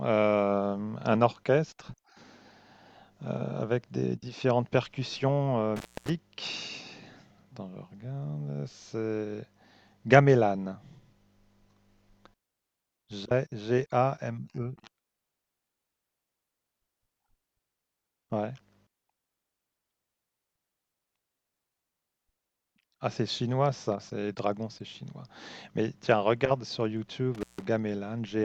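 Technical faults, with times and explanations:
5.76–6.10 s and 27.35–27.64 s, intermittent contact: the speech cuts out for about 255 ms, then about 154 ms, as a loose connection briefly opens. Scratchy crackle at each break and faint hiss during the gap distinguish it from a clean digital dropout.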